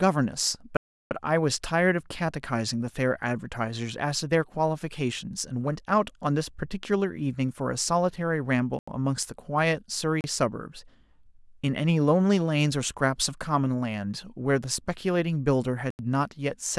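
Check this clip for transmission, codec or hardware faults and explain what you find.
There's one problem here, blocks of digital silence, four times in this speech. The long one runs 0.77 to 1.11 s (341 ms), then 8.79 to 8.88 s, 10.21 to 10.24 s and 15.90 to 15.99 s (85, 32 and 85 ms). The audio drops to silence and snaps back with no fade. The 85 ms holes fit a missed 2048-sample output buffer, the first gap four of them. The long one's a clear hole.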